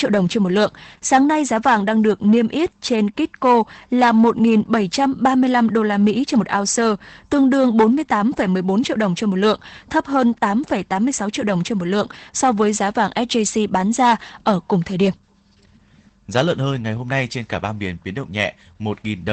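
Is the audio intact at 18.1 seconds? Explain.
No, Opus voice compression at 18.1 s, present throughout. The sound fits SILK coding at about 12 kbps: the band stops near 8.6 kHz and the excitation is coded coarsely, so the speech sounds muffled, hoarse and faintly robotic.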